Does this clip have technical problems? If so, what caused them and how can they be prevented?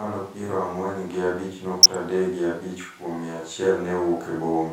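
Yes. DAB burbling from 1.79 to 2.04 s: residual bit errors from weak reception corrupt MP2 sub-band data, adding short noise blips over the speech. Improving antenna placement or signal strength keeps errors within the correction's reach.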